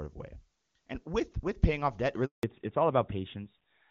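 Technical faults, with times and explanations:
2.25 to 2.43 s, handover gap: Right after "with paying off debt", the call was passed from one network link to another, and no speech frames reached the receiver while the switch was made. The sound fades out within a few tens of milliseconds and then drops to silence for about 180 ms until the new link begins carrying audio. Whatever was said during that stretch never arrived, so it is missing outright rather than garbled.
2.43 s to the end, fallback to narrowband: When the new link came up, the call left HD Voice and resumed on an older narrowband codec. Before the switch, the wideband coding carried clear, full-bodied speech with energy well above 4 kHz. From here on, nothing above 4 kHz survives, which fits a move from AMR-WB at its top rate to AMR-NB at 12.2 kbit/s. The voice turns duller and rougher, with sibilants and crisp consonants losing their edge.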